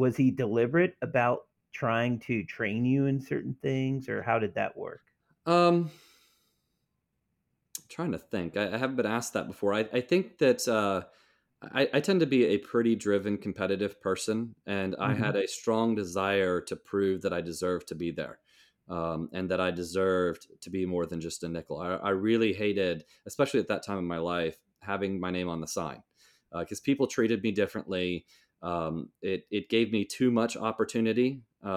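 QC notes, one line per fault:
Nothing to flag here; I listened all the way along this speech recording and didn't catch a single technical problem worth a note.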